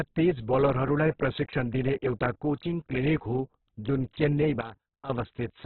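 Heavy Opus compression, likely at a very low rate in the region of 8 kbps, has starved the encoder of bits throughout, so it fills bands with folded or noise content. The speech sounds rough and grainy, with nothing above 4.2 kHz, giving a narrowband, muffled quality.

From 4.61 to 5.10 s a sudden gain jump drops the digital level by about 12 dB from one sample to the next, likely a setting applied without a ramp. Speech and background noise fall together abruptly, then return.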